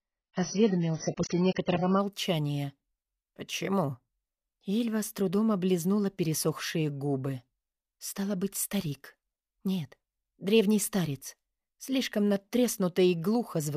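For the first 2.0 s you're hearing an adaptive stream starting at a low bitrate: nothing reaches above about 6.8 kHz and the codec smearing is stronger, which points to roughly 12 kbit/s AAC. Then it jumps cleanly to something near 96 kbit/s, with no gap.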